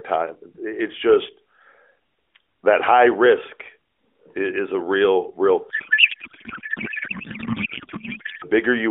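Right after "is a real real", from about 5.70 to 8.45 s, there's a codec payload misread: octet-aligned AMR decoded as bandwidth-efficient, so the speech turns into garbled, warbling noise.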